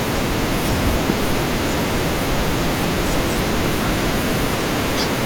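A loud pop strikes at 1.10–1.12 s and again at 3.66–3.68 s, likely a voltage glitch, roughly 15 dB above the speech, showing as a sharp waveform spike and full-height spectrogram stripe.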